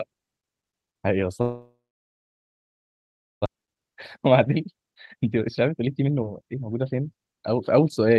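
From 1.41 to 3.48 s, a fading hiss gives way to a flat waveform and a blank spectrogram. A long network dropout is the likely cause, and over a second of audio is lost. From 4.80 to 8.17 s, a jitter buffer speed-up trims out pitch periods, so the speech runs about 21% faster at unchanged pitch. On the spectrogram the harmonics stay level while syllables crowd closer together, below a steady 12 kHz ceiling from the call codec.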